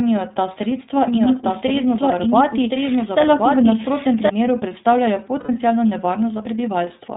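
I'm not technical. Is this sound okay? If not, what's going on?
No. The speech has been squeezed through the iLBC codec, a phone-call format. It cuts everything above 4 kHz, so voices sound muffled, slightly rough and synthetic.

From 1.1 to 4.3 s there's a doubled audio track. A second copy, about as loud, trails one second behind. It's likely a second recording path or a faulty edit.

At 5.40 to 5.50 s there are lost iLBC frames. About 90 ms went missing, and the gap is filled with a brief held, buzzy sound.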